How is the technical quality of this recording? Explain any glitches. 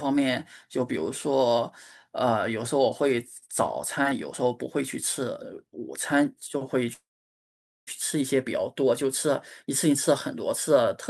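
There is one clear glitch, a call audio freeze from 6.93 to 7.89 s. The last sound smears into a brief fading tail, then about 830 ms of silence, likely because delayed packets drained the jitter buffer. Unlike a dropout, nothing is lost: the speech resumes exactly where it stopped, just about 0.94 s late.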